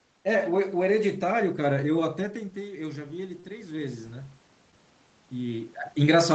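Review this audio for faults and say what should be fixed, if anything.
Automatic gain rising: from 2.16 s to 4.07 s the gain control reacts to the input level falling by about 10 dB, as the talker moves back from the microphone around 2 s, and slowly lifts its gain by about 5 dB. The voice recovers only gradually over nearly two seconds, and the room noise swells along with it, so the background rises behind the speech. To prevent this, give the gain control a faster attack and a noise-aware gate so it doesn't pull the room noise up with the voice.

Short stall from a late packet: at 3.40 s to 3.44 s a packet arrives late, the jitter buffer runs dry, and the receiver stretches the last sound for 28 ms until the data catches up. Nothing is lost, but that moment is held unnaturally long, and playback now runs 28 ms later than before. Because it falls inside the gain rise, the stall comes during a swelling level. 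To prevent this, let the jitter buffer hold a little more margin on this path.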